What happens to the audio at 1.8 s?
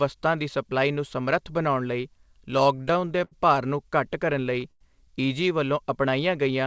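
Nothing goes wrong at 1.8 s: the speech continues intact through the call path, with the G.722 codec's usual ceiling leaving nothing above 8 kHz.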